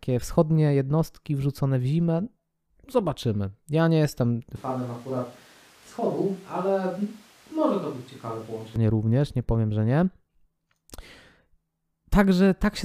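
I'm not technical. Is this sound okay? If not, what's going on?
No. From 4.56 to 8.76 seconds, right after "nie jestem", the speech suddenly sounds roomy, hollow and thinner, a little quieter, with more background noise. It snaps back just before "również nie powiem że". This is a switch to a distant microphone, likely because the close microphone dropped out and a farther one took over. A speaker turning away would change the sound gradually, but here the change happens instantly at both ends.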